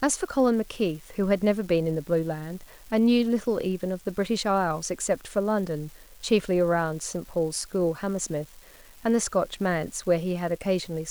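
Right from the start and all the way through this speech clip there's a steady crackle, a fine fizz that keeps going even in the pauses. That's an unreliable data bit: one marginal data line flips at random, and each wrong sample jumps by the same step of about −38 dBFS.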